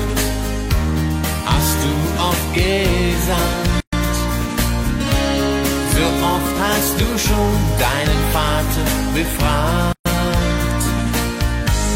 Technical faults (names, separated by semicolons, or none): gap at a join of encoded pieces